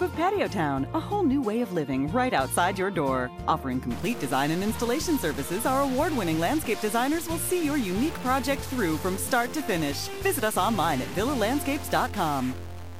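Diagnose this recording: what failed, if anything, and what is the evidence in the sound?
Stuck bit, from 3.91 s to the end of the recording. At that point the sound turns harsh and buzzy, and quiet passages fill with a noise floor that was not there before. The likely cause is one data line at the converter or its wiring sitting at a fixed value. About half the samples are then pushed off by that bit's weight, a step of about -35 dBFS, in a pattern that follows the waveform.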